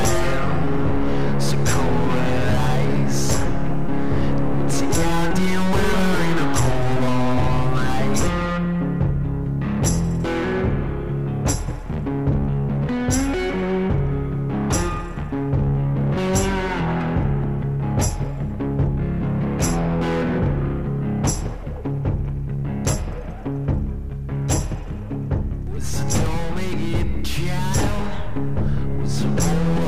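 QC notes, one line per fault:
26.26 s, dropped buffer (overrun): the sound jumps ahead with no silent gap. The input buffer was likely overwritten before being read, so about 5 ms of audio vanished and the pieces on either side were butted straight together.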